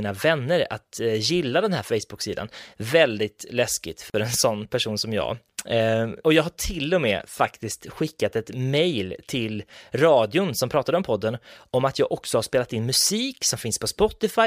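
At 4.10 s the speech drops out for about 41 ms, through 4.14 s, right before "en sån person som". That's a gap at a join of encoded pieces: two separately encoded chunks were butted together without trimming, so the encoder's start-up delay and end padding both stayed in. You hear a short hole with smeared edges, and then the speech picks up exactly where it left off.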